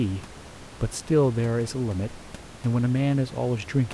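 The speech signal shows no technical fault, with only the room's own background noise sitting about 19 dB below the voice as a normal part of the recording.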